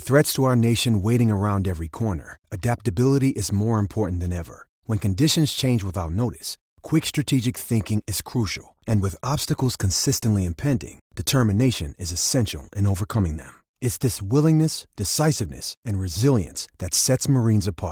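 There are no technical faults to describe at any point in this speech clip.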